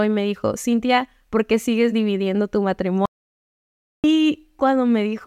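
A speech recording with an audio dropout to silence from 3.06 s to 4.04 s, where the sound cuts off mid-flow and nearly a second of material, 0.98 s, is lost to silence with no room tone. The likely cause is a momentary loss of the input signal while recording continued.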